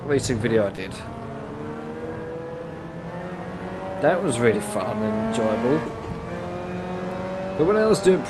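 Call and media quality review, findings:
Brief smear, 0.75–0.80 s. Short concealed packet loss on the Opus receive side: about 20 ms missing, which fits one lost frame. The decoder extended the preceding sound across the gap, then blended back into real audio.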